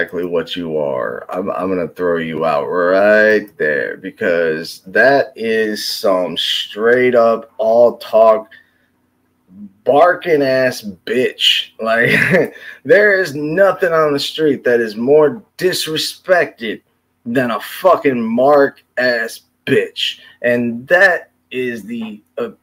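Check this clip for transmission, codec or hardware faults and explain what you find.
Nothing in this audio points to a transmission, codec or hardware fault.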